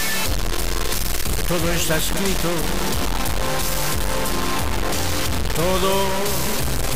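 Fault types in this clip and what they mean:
Low bit depth without dither: the audio was likely cut down to about 3 bits by plain truncation with no dither, so the rounding error follows the signal and is roughly as loud as it, leaving the whole sound coarse and gritty, with quiet parts sputtering or dropping out.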